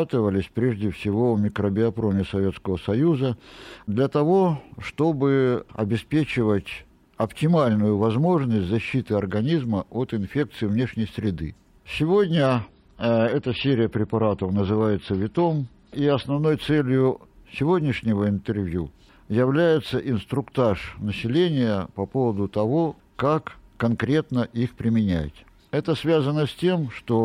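An adaptive stream at a lower bitrate briefly took over between 12.47 and 16.47 s, as the player switched down to a cheaper encoding for about four seconds, which fits a drop from 128 to 32 kbit/s MP3. Across that stretch the audio, which carries nothing above 15.1 kHz, turns duller at the top, with heavier coding artefacts. The loss and recovery of quality are abrupt, with no gap in playback.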